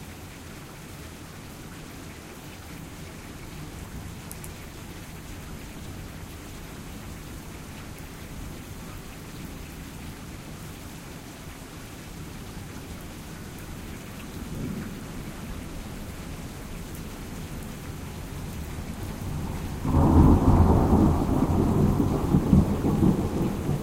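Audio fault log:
No faults detected in this recording of sounds; nothing to log.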